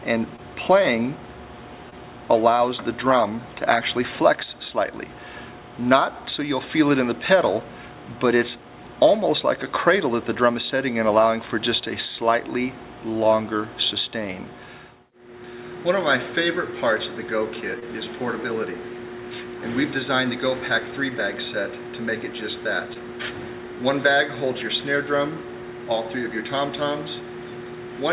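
Short concealed packet loss occurs four times in this call audio, at 0.36, 1.90, 17.80 and 22.93 s. Each time, about 20 ms of audio did not reach the decoder in time, and the receiver covered the gap by extending the preceding sound before blending back into the real signal. Each patch lasts roughly 0.04 s and is heard as a brief smear or wobble where the sound momentarily loses definition. The audio has nothing above 4 kHz, which fits G.711 mu-law at 64 kbps.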